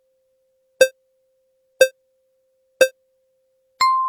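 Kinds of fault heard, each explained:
No audible technical faults in this recording.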